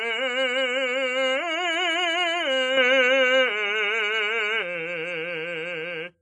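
Throughout the music, content stops at 10.7 kHz, with ringing, washy transients and a hiss that breathes with the signal. This is likely WMA compression. Long transform blocks smear quantisation noise in time, and weak lines are zeroed, which fits a low bitrate of around 24 kbps.

From 2.77 s to 4.63 s, the band narrows abruptly to 7.6 kHz with no gap at either switch. A modest level shift and a faint new noise floor come with the duller, boxier tone, which points to the input likely being switched to a poorer device.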